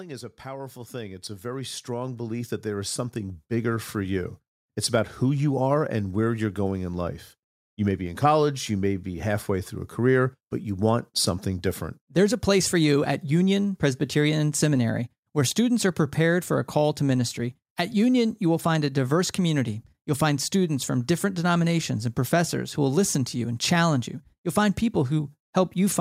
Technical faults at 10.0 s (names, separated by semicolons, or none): automatic gain rising